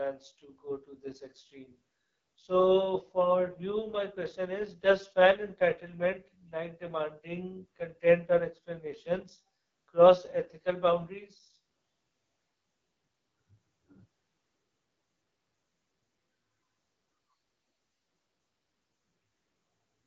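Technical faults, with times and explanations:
Throughout: AMR wideband (HD Voice) codec. The speech is rough and raspy, with a buzzy, gritty edge, and nothing is present above 7.1 kHz. The heavy damage points to the codec's lowest rate, about 6.6 kbit/s. At that rate the pulse-driven vocal tract model has too few bits to capture the excitation, so voiced sounds come out coarse. The top band is shaped noise rather than real speech detail.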